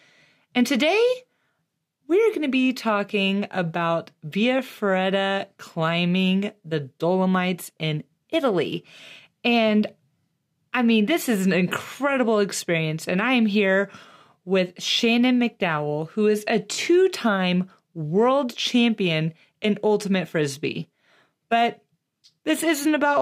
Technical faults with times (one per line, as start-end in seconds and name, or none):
16.74-16.78 Bluetooth stutter